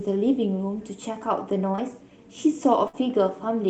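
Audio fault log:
1.71 to 1.80 s, short concealed packet loss: two back-to-back gaps of about 20 ms each, starting at 1.71 s and at 1.75 s. The receiver bridged each hole by extending the preceding sound for about 21 ms and then blending into the real audio. The result is a brief smear or wobble rather than a held tone. It differs from a burst because each patch is too short for the fill to fade or audibly stall.
2.88 to 2.95 s, burst of packet loss: about 60 ms of audio never arrived in time. Concealment stretched the last sound for about 57 ms and lowered it as the gap lengthened, so a voiced sound turns into a short held buzz and other sounds into a fading hiss. The audio then resumes with that stretch missing. That audible held-then-fading fill and the jump in the material are what set it apart from the brief smears at 1.7 s. The surrounding audio, carried by the Opus call path with its top end limited to 8 kHz, sounds consistent with a call at around 32 kbps.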